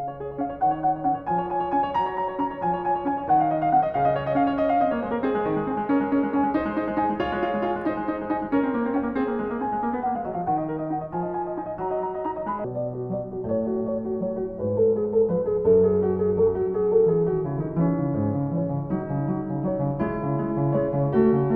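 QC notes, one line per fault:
12.64–21.56 s: section at the wrong speed. The music suddenly plays at 0.598 times its speed, roughly ten semitones lower and proportionally slower. Because pitch and tempo drop together, this is a speed error rather than a pitch shift, likely from playback on the wrong clock.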